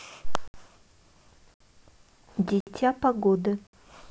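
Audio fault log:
0.48–0.54, 1.54–1.60, 2.60–2.67 and 3.67–3.73 s, gap between chunks: four 64 ms silences break the speech, one at each join between 1-second chunks. Nothing's lost, just interrupted.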